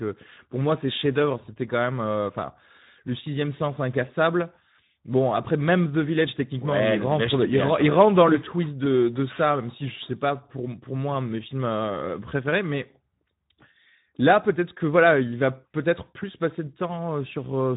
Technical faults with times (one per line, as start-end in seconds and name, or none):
0.00-17.77 Speex codec